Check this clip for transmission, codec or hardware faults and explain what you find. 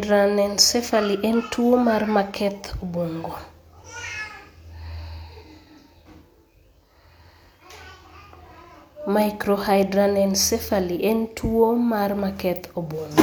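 No faults detected.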